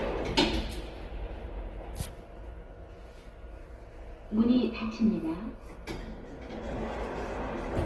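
An everyday sound recording, and the damage runs through the whole clip. Tonal parts come out grainy and rough, and some detail turns to a hiss-like texture. There is little of the swirling, watery quality of MP3. The top end stops short, near 12 kHz. The likely cause is Opus compression in its CELT music mode at a low bitrate, which fits about 16 kbps. Short of bits, the encoder fills bands with noise or copied lower content.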